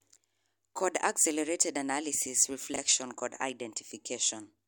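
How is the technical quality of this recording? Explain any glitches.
The recording has one glitch, a brief jumble in the speech at 2.74 to 2.78 s. Chunks out of order: one 20 ms chunk plays one chunk late, after its successor, leaving three hard joins. Unlike a dropout, nothing goes missing; the sound is only scrambled briefly.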